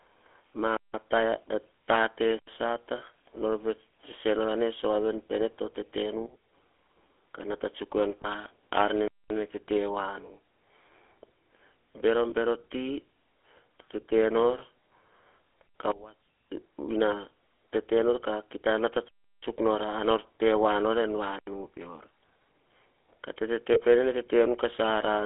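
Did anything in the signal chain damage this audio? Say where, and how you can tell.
Yes. The codec stage colours the whole recording. The speech has the buzzy, gravelly roughness of the GSM full-rate codec, and the band is confined to roughly 300 Hz to 3.4 kHz. Unlike plain band-limiting, the excitation itself sounds coarse, which fits 13 kbps full rate.

At the driver or buffer stage, a block of digital silence runs from 2.39 to 2.48 s. The speech drops to silence for about 85 ms with no fade, which fits an unfilled 4096-sample buffer.

Sudden gain jumps occur at 6.26 to 6.53 s, where the level falls about 12 dB, and at 15.92 to 16.49 s, where it falls about 22 dB. Speech and background noise drop together, instantly, then recover. That points to call processing, likely an unramped gain setting, rather than a level change at the source.

Lost GSM frames, one 20 ms frame each time, occur on the network path at 8.22, 12.30 and 23.74 s. 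Each is a brief rough, metallic ring as the decoder repeats the last good frame. It is not a clean hole like the silence block.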